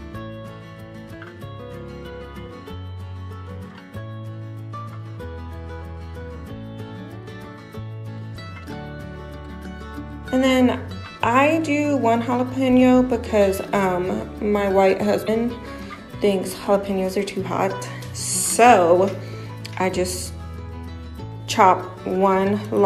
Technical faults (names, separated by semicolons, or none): damaged data in a compressed stream